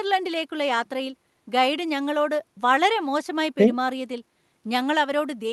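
No technical faults are audible.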